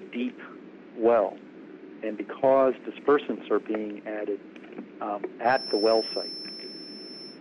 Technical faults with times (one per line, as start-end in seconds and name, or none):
5.41-7.41 feedback whistle